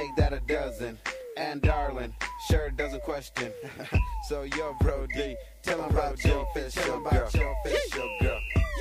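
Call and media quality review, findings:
Doubled audio track, 5.78 s onward: abrupt full-band copy about one second late, near-equal level; waveform shows repeated envelopes overlapping. Likely second slower capture path.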